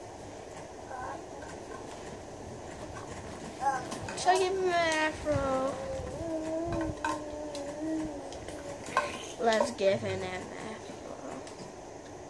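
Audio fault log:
No faults found; nothing audible to log.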